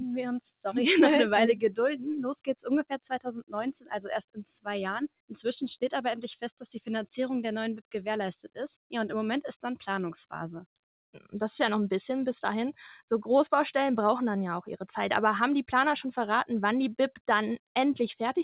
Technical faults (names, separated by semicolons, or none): sound cut by the noise suppressor